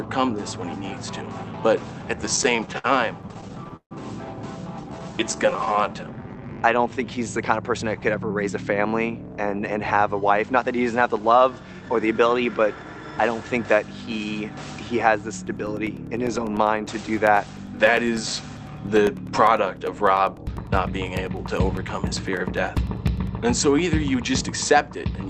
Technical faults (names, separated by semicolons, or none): repeated stalls (stutter); jitter buffer slow-down; scattered short gaps; jitter buffer speed-up; periodic USB or driver dropouts